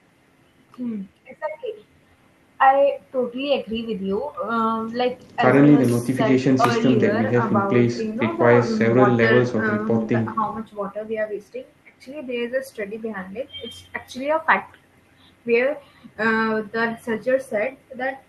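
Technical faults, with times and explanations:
Nothing in this speech recording stood out as a technical problem on listening.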